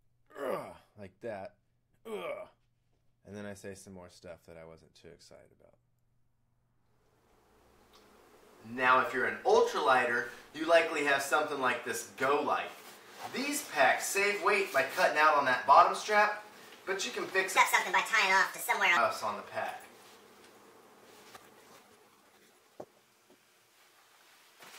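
A section at the wrong speed runs from 17.57 to 18.97 s. The audio there plays 1.47 times faster than it should, so it sounds hurried and its pitch jumps up by roughly seven semitones, then drops back at 18.97 s. The likely cause is that this stretch was played or edited against the wrong clock. On a spectrogram the harmonic bands visibly step upward for that span, with events packed closer together in time. The waveform shows denser cycles and a compressed envelope.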